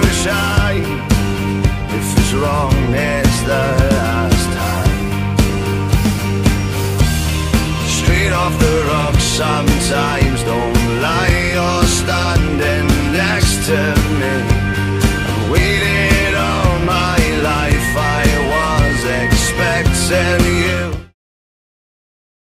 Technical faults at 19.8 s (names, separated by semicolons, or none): none